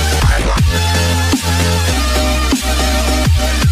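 At 1.92 s there is damaged data in the compressed stream: corrupted bytes make the decoder misread a frame and hunt for the next valid header, producing a brief chirp or blip.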